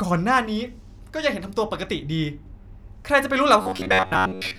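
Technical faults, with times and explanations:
3.62 to 4.59 s: robotic sound from repeated short buffers. The speech turns into a stiff, metallic buzz at about 94 Hz that still roughly follows the words and runs to the end of the clip. The likely cause is audio arriving too late, so the playback software fills each gap by looping a very short stretch, about 11 ms, while the real audio is dropped. Repeats fill most of this stretch, and that fixed period forces the buzzing pitch.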